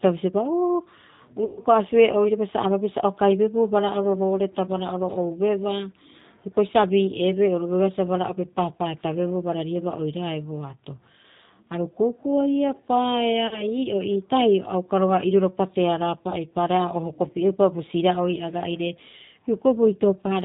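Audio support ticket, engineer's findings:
G.729 codec (G.729A, 8 kbit/s), throughout: speech band-limited, nothing above 4 kHz; rough, slightly synthetic texture plainly audible. Speech rebuilt from vocal-tract filter, pitch predictor and sparse pulse excitation per 10 ms frame, discarding fine spectral and noise detail.

VoIP packet loss concealed by the speech codec at 1.45–1.61 s, 13.47–13.66 s and 16.30–16.36 s: speech smeared into a fading buzzy tone or coloured noise, then weak on recovery. Decoder extrapolated last pitch and filter across 120 ms, 40 ms and 20 ms gaps, ramping gain down.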